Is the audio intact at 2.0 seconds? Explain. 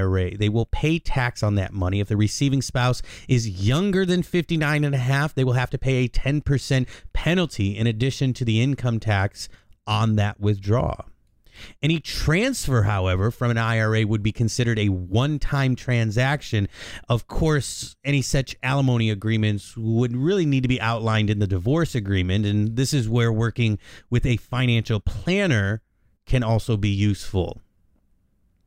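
Yes, the speech at 2.0 seconds plays through intact, with no audible fault at that moment.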